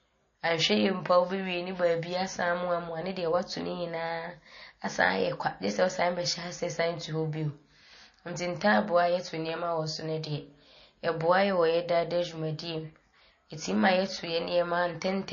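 From start to finish the speech carries plainly audible MP3 compression damage. Nothing reaches above 7 kHz, so sibilants lose their edge, and the quieter detail has a watery, swirling quality with metallic chirps on s sounds. That points to a low bitrate, likely around 32 kbps, where the encoder cuts the treble and zeroes weak frequency lines that flicker between frames. A spectrogram would show a hard ceiling at 7 kHz with patchy, blocky gaps beneath it.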